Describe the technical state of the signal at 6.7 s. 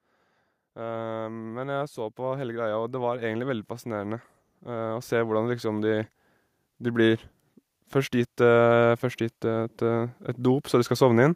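At 6.7 s the speech signal is intact, with no audible fault.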